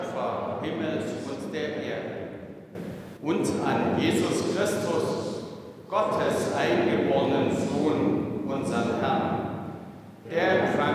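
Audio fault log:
Nothing to log here, as no faults turn up anywhere in the clip.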